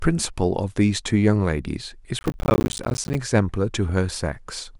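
From 2.19 to 3.15 s the speech is overtaken by processor overload crackle. The processor repeatedly failed to deliver its small buffers on time, apparently about 10 ms each, and each missed buffer left a hard-edged slot of silence. About fifty such misses crowd into under a second, producing a gritty, tearing crackle rather than one clean dropout. The crackle stops when the load eases. Unlike clipping, it doesn't rise and fall with loudness.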